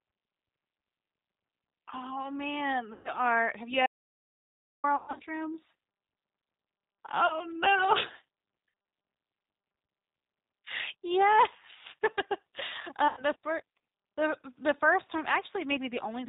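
Throughout, the G.729 codec at 8 kbit/s rebuilds the speech from a filter and a few pulses per frame. The result is plainly rough and synthetic, and the spectrogram is empty above 4 kHz.

VoIP packet loss concealed by the speech codec first appears at 2.93–3.13 s, covering 120 ms. The decoder repeats its last pitch and filter, so the voice turns into a fading buzzy tone or coloured noise.

At 3.86–4.84 s comes an audio dropout to silence, likely from a lost input. For 0.97 s the waveform is flat and the spectrogram is blank, with no room tone left.

The same concealment returns at 4.96–5.23 s, where 180 ms is lost across a 240 ms stretch. It recurs at 7.27–7.39 s for 30 ms and at 13.08–13.24 s for 90 ms.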